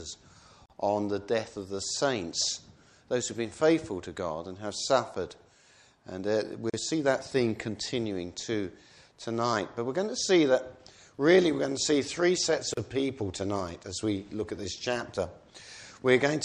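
At 0.66 to 0.70 s, 6.70 to 6.74 s and 12.74 to 12.77 s, a gap at a join of encoded pieces cuts in, repeating every 6 s and lasting 42, 37 and 37 ms. Untrimmed encoder delay and final-frame padding leave brief dropouts. On the waveform these appear as flat near-zero stretches, and on the spectrogram as narrow blank vertical strips with smeared edges.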